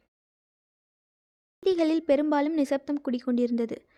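A clipped start after a pause arrives at 1.47 s, when speech resumes after 1.47 s of silence from the top of the clip. The playback device appears to have powered down or lost lock during that quiet stretch, so it needed time to come back. The first 0.16 s of sound, until 1.63 s, never reaches the output. The speech bursts in abruptly from nothing with its opening sounds cut off.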